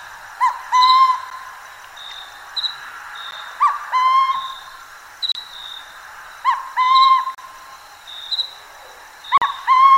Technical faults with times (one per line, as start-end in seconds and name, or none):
1.30 gap between stream segments
3.31 gap between stream segments
5.32-5.35 gap between stream segments
7.35-7.38 gap between stream segments
9.38-9.42 gap between stream segments